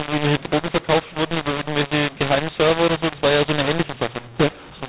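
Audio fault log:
Throughout: mu-law and A-law mixed up. The speech was coded with G.711 A-law but decoded as mu-law, so sample levels are scrambled, some too loud and others too quiet. Near-silent samples are lifted well above zero, making the voice harsh and filling pauses with noise.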